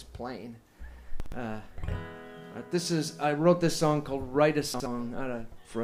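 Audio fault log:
1.20 to 1.32 s and 4.74 to 4.86 s, chunks out of order: Each spot is a 120 ms span made of two 60 ms chunks that play swapped. The earlier chunk arrives one chunk late and lands after the one that should follow it. No audio is lost. The sequence is simply wrong. That gives a brief jumbled moment. Each swap also creates three hard joins where unrelated waveform edges meet.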